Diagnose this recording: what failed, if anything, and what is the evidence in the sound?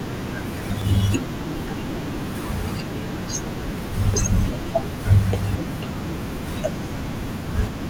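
It's the codec: damaged data in the compressed stream, heard as quick glitches at 0.82, 3.79 and 5.55 s as the decoder loses sync.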